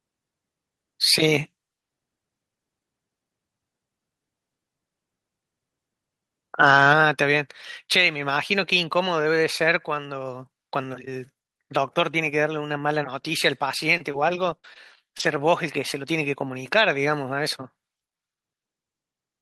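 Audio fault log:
6.63–6.93 s, microphone overload: For about 0.3 s the loudest peaks exceed full scale by about 3 dB, and their tops are flattened at the converter limit, likely because the input gain was set too high. Roughly 2 percent of samples in this span are clipped. The squared-off waveform adds harsh odd harmonics, which give the loudest syllables a gritty, crackling edge.
6.93 s, microphone volume stepped down: Immediately after the distorted peak, the speech and the background noise floor both drop by about 4 dB at once. This sounds like the call software likely detecting the clipping and cutting the device's input gain in one step, rather than a natural change in how loudly the person is speaking.
13.97–15.21 s, repeated packet loss (robotic sound): Across this 1.2 s span, five separate gaps open in the stream, the longest lasting 60 ms, and together they remove about 140 ms of audio. 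The receiver fills each hole by extending the last received sound, and around 200 ms of signal ends up rebuilt this way. Because the gaps come in quick succession, the repeated synthetic patches make the speech choppy, with missing fragments.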